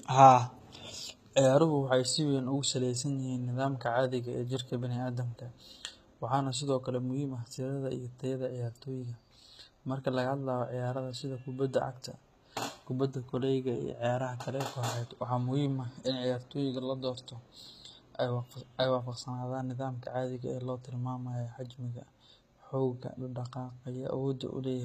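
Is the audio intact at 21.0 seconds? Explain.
No. At 21.0 s the speech carries the same HE-AAC compression damage heard across the whole clip. The s sounds come out gritty and lispy, likely because the treble is rebuilt by copying lower bands upward rather than coded directly. That fits a very low bitrate, around 20 kbps. On a spectrogram, the upper band looks like smeared, repeated patches with harmonics that don't line up, and nothing appears above a hard ceiling at 14.9 kHz.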